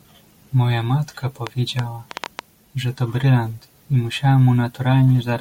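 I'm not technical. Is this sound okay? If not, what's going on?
No, not quite. From about 1.47 to 2.4 seconds there's a train of clicks: roughly seven sharp ticks, about six or seven a second, spaced unevenly and sitting clearly on top of the speech. They stop just before "że to brylant i". Each click is a short burst that got added to the signal, likely from electrical interference from nearby gear or a faulty connection or power supply.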